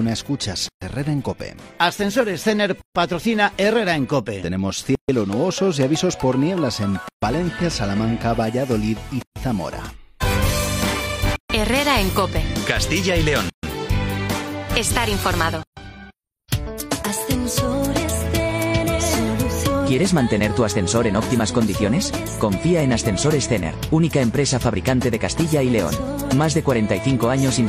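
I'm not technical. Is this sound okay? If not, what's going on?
No. There's a gap at a join of encoded pieces: a silence of about 0.13 s at 0.69, 2.82, 4.95, 7.09, 9.22, 11.36, 13.50 and 15.63 s, where separately saved pieces were stuck together. Unlike a dropout, nothing is lost; the sound resumes exactly where it paused.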